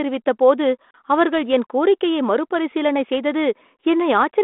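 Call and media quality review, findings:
No faults found; 32 kbit/s G.726 path working normally.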